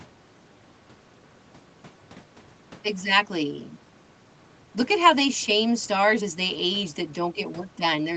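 Nothing is technically wrong with this speech clip, which has passed through a call's microphone processing and codec and tops out at 8 kHz, as that call path normally leaves it.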